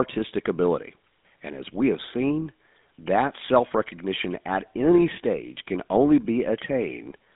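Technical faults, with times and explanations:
Throughout, GSM full-rate codec: the speech sits in a 200 Hz to 3.6 kHz telephone band with nothing above 3.7 kHz. A plainly audible buzzy, gravelly roughness comes from a vocal-tract model driven by sparse, evenly spaced pulses, which fits a 13 kbps stream.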